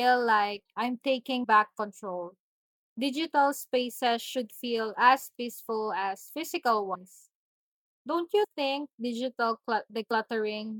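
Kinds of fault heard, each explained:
Compressed frames skipped: at 1.43, 6.94 (just after "as physical"), 8.43 (just before "think digital") and 10.10 s (just after "think digital"), the speech lurches forward. Whole coded frames of about 26.1 ms each were never decoded, so roughly three frames (about 70 ms) vanish at the first two points and about two (about 50 ms) at the last two. Overlapping neighbouring frames blend across each gap, leaving a short smeared blip, not a sharp click.
Block of digital silence: at 5.69 s the output drops to silence for 1.45 ms and snaps straight back, which fits a 64-sample block the playback path failed to fill in time. With no fade on either side, the abrupt edges make a small tick.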